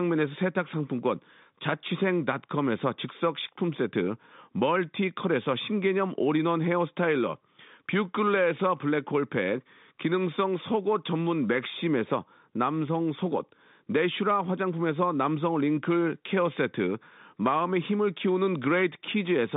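No technical faults can be heard in this speech.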